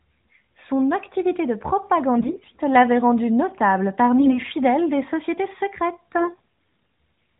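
AMR bit errors hit at 2.18 to 2.54 s, 4.19 to 4.39 s and 6.16 to 6.39 s. Around 15% of the less-protected frame bits in the first burst, and around a tenth in the other two, arrived flipped, so excitation pulses landed wrongly and fine pitch and gain drifted. The speech holds its level but briefly turns scratchy and gargly.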